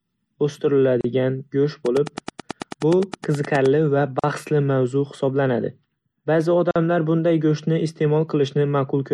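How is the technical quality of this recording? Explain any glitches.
The recording has three kinds of faults: codec damage throughout, three short dropouts, and a burst of clicks.

Throughout, the speech sounds watery and swirly, with dulled treble and smeared consonants. This is likely heavy MP3 compression at a low bitrate, around 64 kbps, which discards weak frequency content.

At 1.01 to 1.04 s (35 ms), 4.19 to 4.24 s (42 ms) and 6.71 to 6.76 s (46 ms), there is a gap at a join of encoded pieces. Separately encoded pieces were joined with their encoder delay and padding left in, so brief silences cut into the speech before it resumes.

From 1.86 to 3.67 s, a train of clicks appears. This is probably interference or a faulty connection injecting about twenty evenly spaced pulses at 9.5 per second, heard as ticking roughly 10 dB above the speech.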